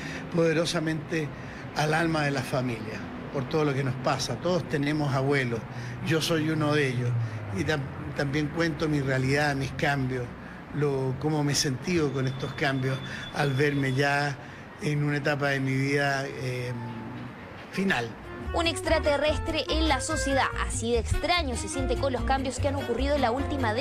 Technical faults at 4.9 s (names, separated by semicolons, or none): short stall from a late packet